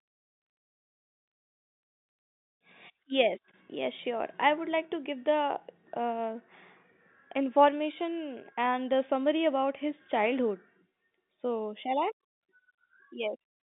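No faults are audible in the speech, which sits within a telephone band of about 150 Hz to 3.7 kHz on a 64 kbps line as expected.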